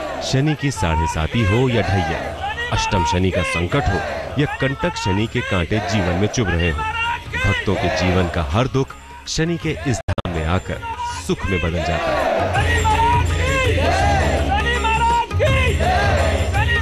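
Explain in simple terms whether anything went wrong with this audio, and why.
Something did go wrong, briefly, at about 10.01 to 10.26 seconds: a digital broadcast dropout. The receiver stopped getting usable data for a moment and muted itself rather than play damaged sound. The audio drops out in several quick holes spread over about a quarter of a second, adding up to roughly 168 ms of silence, the longest gap 72 ms. Each cut fades out in just 3 ms, so it sounds abrupt. Whatever was broadcast in those holes is gone for good.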